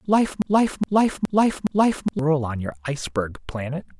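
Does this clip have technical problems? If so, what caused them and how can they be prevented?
Yes. A broken-record loop runs from 0.42 to 2.19 s, with a 416 ms fragment of speech repeating four times and the intended speech lost. The player or stream likely stalled and kept resending its last held fragment. Deeper buffering and stall detection that mutes instead of replaying would prevent it.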